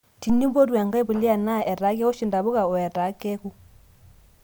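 No technical faults can be heard anywhere in this recording.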